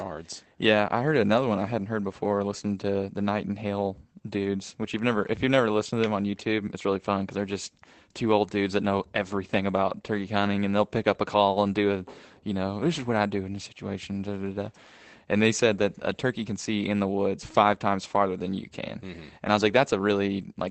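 At 1.79 s, right after "heard another one I" and just before "heard before", there's a lost packet rebuilt from error correction. A 20 ms stretch, about one packet's worth, got filled from the low-bitrate backup copy Opus carries in the next packet, so there's no gap, just a brief rougher, noisier patch riding on the call path's usual coding texture.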